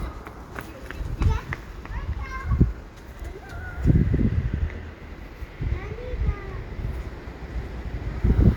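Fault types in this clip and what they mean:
Overlap between stream segments: two adjacent segments claimed the same time span, so the player discarded about 15 ms of sound at 1.55 s. A brief click or skip results, seen as a sudden waveform jump and a thin vertical broadband line on a spectrogram.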